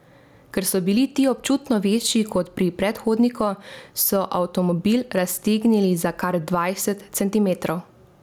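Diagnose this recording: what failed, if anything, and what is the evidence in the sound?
Gain pumping runs through the whole speech clip: the level swings by around 10 dB, leaving everything squashed. Likely cause is the input gain set far too hot, with a fast limiter or compressor clamping each loud moment.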